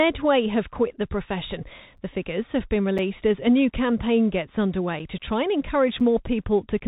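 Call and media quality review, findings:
Bluetooth CVSD headset codec, whole clip. Narrowband speech, nothing above about 3.8 kHz, granular hiss under the speech, scratchy sibilants. Likely component: headset link on the Bluetooth voice path, consistent with a 64 kbps one-bit delta stream. Mechanism: each sample only steps up or down, with an adapting step size; fast high-frequency energy outruns the step and distorts. Spectrogram: hard ceiling near 3.8 kHz, empty above, noisy grain filling the band.

Gap between chunks, six hard-edged dropouts of about 6.5 ms each, at 0.97 s (between "have quit" and "the profession"), 1.97 s, 2.98 s (after "figures have been", before "as a new"), 3.99 s (just after "as a new"), 4.99 s and 6.00 s. Regular 1.0 s spacing points to a chunked playback or transport stage. Mechanism: silence inserted at each chunk join, no audio lost. Waveform: flat near-silent slivers at each mark. 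Spectrogram: thin full-height blank stripes.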